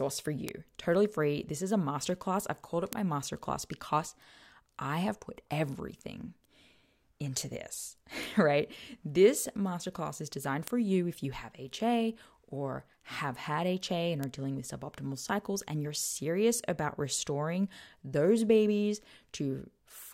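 Five sharp, isolated ticks cut through the speech at 0.49, 2.93 (between "masterclass I've called it" and "my masterclass because"), 8.23, 10.68 (after "masterclass is designed") and 14.24 s (just before "dealing with suboptimal cycles"). They peak at about −14, −8, −20, −8 and −14 dBFS. Each is a bit error spike: a flipped bit throws one sample, two at 0.49 s, off by a power of two, so a broadband click unrelated to the voice appears and vanishes instantly.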